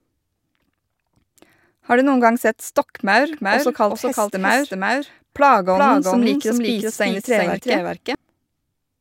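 After "noen gang sett stokkmaur", from 3.33 to 8.15 s, there is a doubled audio track. A dry, slightly quieter copy trails about 400 ms behind. It was likely captured twice. It starts and stops abruptly.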